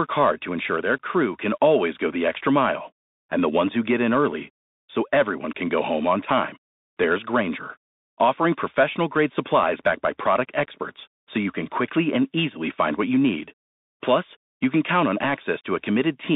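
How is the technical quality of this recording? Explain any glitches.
The recording has the sound of a Bluetooth CVSD headset codec for its whole length. The speech is squeezed into a narrow telephone band of about 200 Hz to 3.7 kHz, which fits a 64 kbit/s CVSD link. CVSD sends one bit per sample saying only up or down, with an adapting step size. When the signal changes faster than the step can follow, it distorts, so sibilants turn scratchy and a granular hiss sits beneath the voice. On a spectrogram, energy stops at a hard ceiling near 3.7 kHz.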